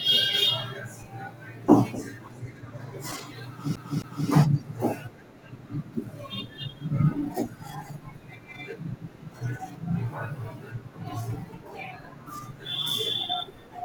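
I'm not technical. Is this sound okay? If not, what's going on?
No. A CD stuck on one turn, from 3.76 to 4.29 s. A scratch on the disc throws the laser back to the same spot on each spin, so about a quarter of a second of speech, 0.26 s, plays twice in a row. There's a brief silence at each jump. You hear a quick, even stutter, like a skipping CD, before the speech carries on.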